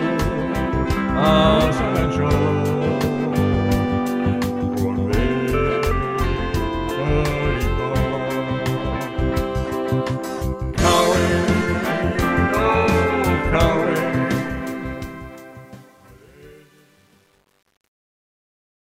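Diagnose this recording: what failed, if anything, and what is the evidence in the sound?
The fade-out that begins around 14 s and runs to the end at 18.8 s has truncation distortion, introduced at a digital gain or sample-format conversion stage that drops low bits without dither. From 14.21 s the tail turns gritty, and from 15.01 s to the end it is at its worst, which fits a word length near 9 bits. On the waveform the decaying signal becomes coarse staircase steps. The spectrogram shows broadband hash rather than a smooth decay.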